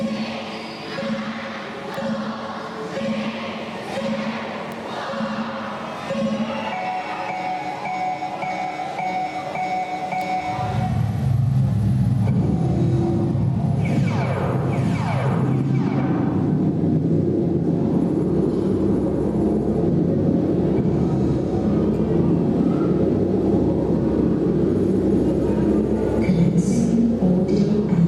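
A single bit flipped in memory or on a digital link, producing a bit error spike at 1.94 s, again at 4.72 s and at 10.21 s. Each time one sample jumps by a power of two, reaching about -14 dBFS, and falls straight back. Because the error has nothing to do with the signal, each spike is heard as one sharp tick spread across the whole spectrum, sitting on top of the audio.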